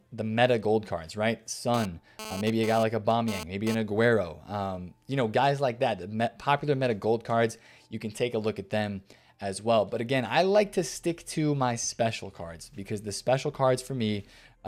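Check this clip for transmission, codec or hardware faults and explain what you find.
One fault is present: GSM phone buzz from 1.74 to 3.75 s. A nearby 2G handset transmitting in data bursts about 217 times a second is being rectified by the audio circuitry, adding a hard, raspy 217 Hz buzz with dense harmonics, about 11 dB below the signal, that comes and goes.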